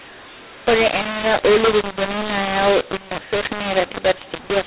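From start to finish, a mu-law and A-law mix-up: A-law-coded speech is decoded as mu-law, scrambling levels, making speech harsh and distorted and filling pauses with noise.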